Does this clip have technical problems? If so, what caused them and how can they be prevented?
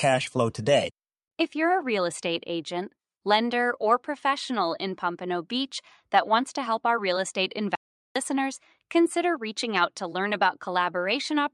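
Yes, there's an audio dropout to silence from 7.75 to 8.16 s, right after "help our real estate": about 0.4 s goes to dead silence, no room tone, then speech snaps back. Likely cause is a momentary input loss, say a loose cable or brief mute. Secure connections and monitor while recording.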